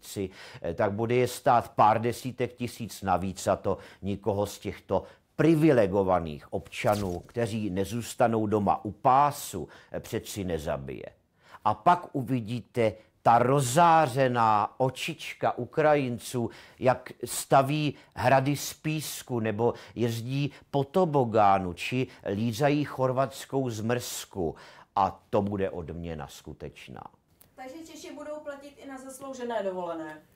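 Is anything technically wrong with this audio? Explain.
No, nothing here sounds technically wrong, so there's no problem to point to in this one.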